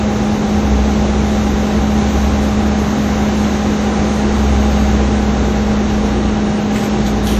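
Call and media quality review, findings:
Whole clip, throughout: ringing, washy smearing on transients; hiss that swells and falls with the signal. Probable component: encoder, likely WMA compression, which fits a WMA 1 encode near 48 kbps. Mechanism: long transform blocks spread quantisation noise tens of milliseconds around each event; weak lines zeroed. Spectrogram: hard cutoff at 16.2 kHz, blotchy holes and pre-echo smear around onsets. Waveform: soft noise floor rising just ahead of sharp attacks.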